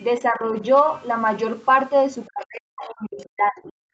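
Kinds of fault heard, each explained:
Speech suppressed in double talk: the speech dips slightly from 0.21 to 0.62 s, then from 2.27 to 3.75 s gets pushed way down, nearly gone. The likely cause is an echo canceller mistaking overlapping far-end talk for echo and turning this talker down.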